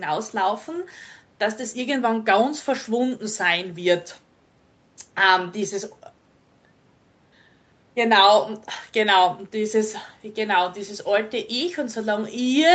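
Nothing stood out on listening to the speech; the call's microphone processing and its Opus path, which keep the sound below about 8 kHz, behave as expected.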